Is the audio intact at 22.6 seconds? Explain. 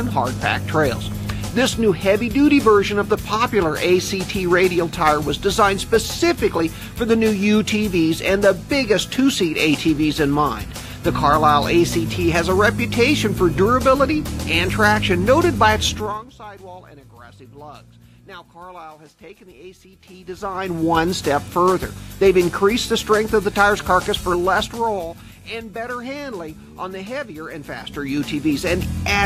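Yes, the audio at 22.6 seconds is intact, with no dropout, click, distortion or other fault at that moment.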